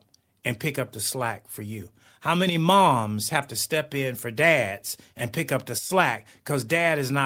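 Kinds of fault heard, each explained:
No technical faults are audible anywhere in the clip.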